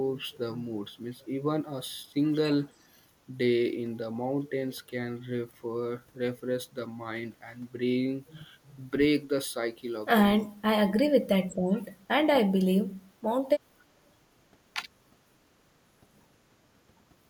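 An echo canceller likely mistook overlapping talk for loudspeaker echo, causing speech suppressed in double talk: the speech dips or briefly drops out at 10.43–10.7, 11.23–11.29, 11.49–11.62, 11.88–12.18 and 12.53–12.58 s, the deepest cuts falling about 30 dB.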